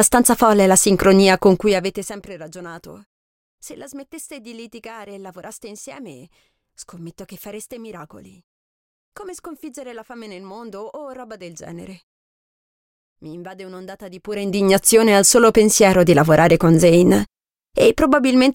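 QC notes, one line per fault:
No faults are heard in this audio.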